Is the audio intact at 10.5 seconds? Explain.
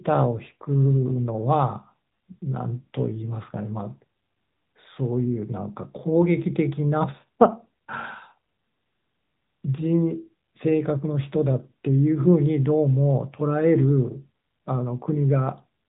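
No. At 10.5 seconds, as throughout the clip, the speech carries AMR narrowband mobile codec damage. The codec rebuilds the voice from a vocal-tract model excited by a few pulses per 5 ms subframe, and nothing above 3.8 kHz survives. The result is dull, band-limited speech with a plainly audible buzzy, synthetic edge, consistent with a mid-rate mode around 10 kbps.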